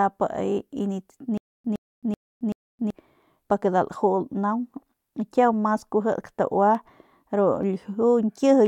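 From 1.38 s to 2.90 s the speech breaks into a stutter with silent gaps. A 113 ms fragment plays four times, each followed by about 269 ms of dead digital silence, so it repeats every 382 ms. The likely cause is a stalled player retrying its last buffer and then running empty. The speech that belonged in that stretch never arrives. On a waveform this appears as identical blocks separated by flat silent stretches, and on a spectrogram as repeated patches with fully blank columns between them.

At 3.22 s and again at 6.75 s there are dropped samples, each a loss of a small fraction of a millisecond. Where the samples are missing, the waveform jumps from one value to a later one. This is likely a skipped handful of samples in the stream. Too little is lost to remove any sound. Each one is heard as a single sharp click. A spectrogram shows each as a thin vertical line spanning all frequencies, and a zoomed waveform shows a step discontinuity.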